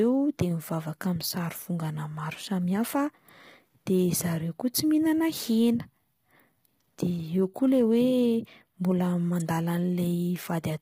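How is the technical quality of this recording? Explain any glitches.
The recording is degraded by coding damage throughout the speech. It sounds rough and grainy from start to finish. Nothing is heard above about 15.6 kHz. Noise fills the gaps between the voice's harmonics, and the top band sounds thin and synthetic. The likely cause is heavy low-delay AAC compression, AAC-ELD as used for video calls. Its short frames blur the pitch harmonics. The grain points to a low bitrate, around 24 kbps, with too few bits to code the detail cleanly.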